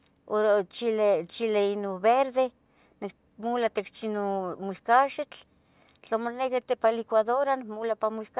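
Nothing in this bit of speech catches the ear as a technical fault; it just runs along without a single dropout, click or glitch to point at.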